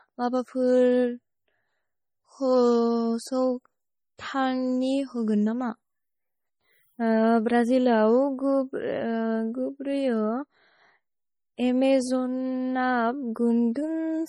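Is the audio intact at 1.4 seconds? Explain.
No. At 1.4 s, as throughout, the speech carries heavy artefacts likely from MP3 compression. The sound is watery and swirly with smeared attacks, which fits a bitrate near 32 kbps, where weak frequency lines drop in and out between frames.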